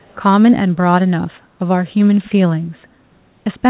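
Echo leak from 0.00 to 0.16 s in this speech clip: a very faint copy of the talker returns about 265 ms late, likely because a far-end loudspeaker's echo canceller let some of its microphone pickup through. The call audio, carried by G.711 A-law, stops at 4 kHz.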